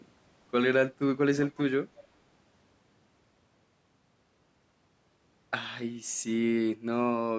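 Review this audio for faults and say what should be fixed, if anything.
There's an echo leak in two places: a delayed copy of the speech, about 0.36 s behind, shows up from 1.36 to 1.62 s at roughly 10 dB down, then much fainter from 1.95 to 2.08 s. That's likely a far-end speakerphone whose echo canceller let some of its own playback back through its microphone. Better echo cancellation or a headset on that end would stop it.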